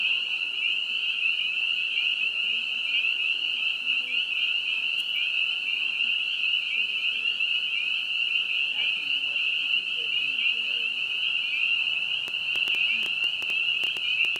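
From 12.28 s to 14.37 s a train of clicks runs over the sound, around fifteen of them at an average of 6.25 per second but unevenly spaced, each landing well above the audio at some 15 dB. They are heard as sharp, similar popping ticks. A spectrogram shows thin vertical broadband streaks, and the waveform shows narrow spikes poking above the envelope. The likely cause is electrical interference or a faulty connection or power supply injecting pulses.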